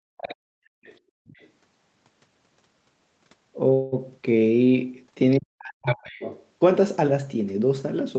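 From 0.05 to 0.25 s the speech dips by roughly 40 dB. This is speech suppressed in double talk, likely from an echo canceller ducking everything while both sides talked. From 0.21 to 0.35 s the other side's voice leaks through, about 15 dB below the speech. Residual loudspeaker echo likely survived cancellation. From 0.56 to 0.83 s the background is gated by the echo canceller. Room sound drops by about 37 dB, then returns. Fainter leaks, about 30 dB down, follow at 0.83 to 0.99 s and 1.26 to 1.49 s. From 3.73 to 3.94 s there is a call audio freeze. The last sound is stretched for 188 ms, likely while the jitter buffer waited on delayed packets. Nothing is lost, but the rest arrives 188 ms later. Another faint leak sits at 5.31 to 5.36 s. Double-talk suppression returns from 5.38 to 6.12 s, roughly 40 dB deep. The strongest leak overlaps it, from 5.86 to 6.46 s, about 10 dB below the speech.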